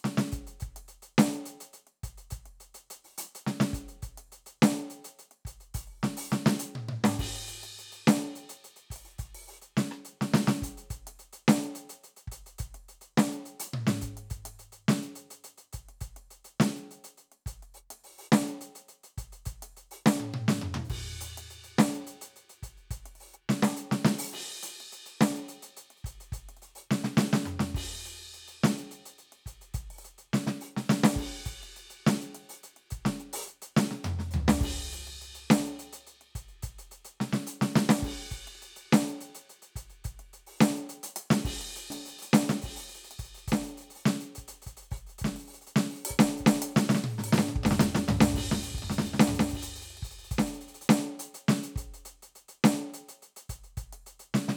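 This is a music clip with a doubled audio track from 41.90 to 50.88 s. A second full-band copy trails the original by about a second, roughly 5 dB quieter, with no decay. It starts and stops abruptly. Likely a slower second capture path.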